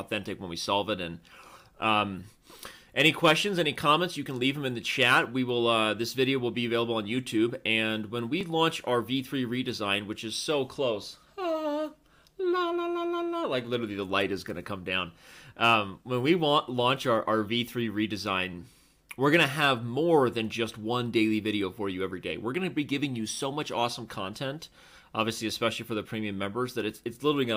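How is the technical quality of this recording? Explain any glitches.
The technical quality of this recording is sound, with no glitches to explain.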